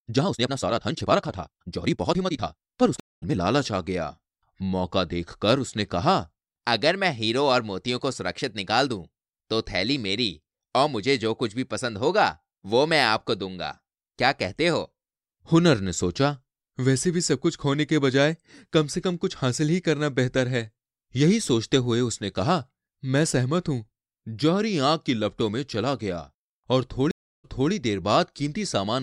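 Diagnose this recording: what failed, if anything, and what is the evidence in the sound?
The opening 3.4 s of speech runs at 1.89 times its natural pace while the pitch stays put, so it sounds rushed. This is a time-stretched section, likely from software dropping short slices to fit a length. On a spectrogram, harmonics hold their frequencies while syllables crowd together.

Two stream reconnects point to the network stage. At 3.00 s a 221 ms silence ends with the audio resuming about a tenth of a second further on. At 27.11 s a 325 ms silence ends with 279 ms replayed. Both appear as flat waveform gaps, then a fresh decoder's fade-in.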